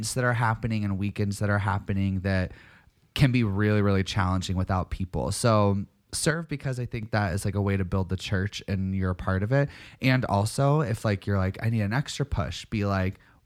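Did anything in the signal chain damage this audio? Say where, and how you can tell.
Yes. From 6.31 to 7.03 s one channel drops out: the mono sum's waveform envelope steps down abruptly by about 6 dB, likely from a loose analogue stereo connection.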